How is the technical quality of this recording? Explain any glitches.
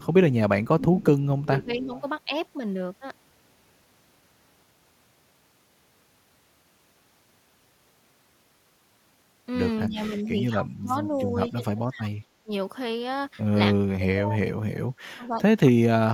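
The recording has two recurring problems, both typical of a speakerphone call with a struggling echo canceller.

Echo leak shows up from 0.0 to 0.68 s, again from 1.43 to 2.01 s, and briefly from 11.15 to 11.21 s. You hear a faint delayed copy of the speech trailing about 0.24 s behind, around 25 dB below the voice in the first two spots and closer to 35 dB down in the last. The likely cause is a loudspeaker on the far end whose echo canceller didn't fully remove what its mic picked up, so that residue was sent back.

Speech suppressed in double talk hits from 0.77 to 1.93 s, 9.87 to 10.96 s, 11.49 to 12.51 s, and 13.74 s to the end. The talker's level dips in chunks totalling roughly 0.7 s in each of the first three stretches, falling around 15, 20 and 25 dB at worst, and then over about 2 s at the end, where it drops as much as 40 dB. This likely happens because both sides spoke at once and the canceller, unable to separate the real talker from the echo, turned everything down.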